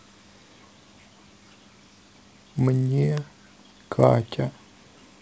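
From start to end, a resampler restarted on every block. Conversion from 24 kHz to 16 kHz runs in 10 ms blocks, each handled alone. Every block edge carries a small error. The result is a 100 Hz buzz that rides under the speech and drops away in silence.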